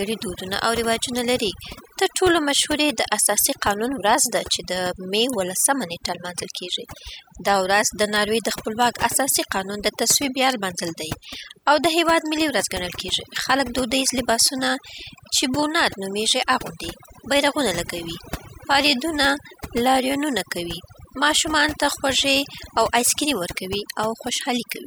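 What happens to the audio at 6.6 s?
Overdone noise removal is at work at 6.6 s, as it is across the whole clip. The noise reduction was set so aggressively that frequency bands near its noise estimate are pulled far down, taking quieter parts of the speech with them, so the background drops and breaks up into twinkling specks.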